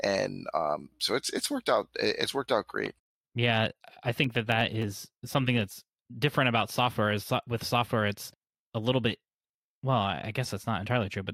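From 4.14 to 4.84 s the processor misses buffer deadlines, skipping about ten tiny buffers, so a gritty processor overload crackle tears through the speech just before "something that's different about".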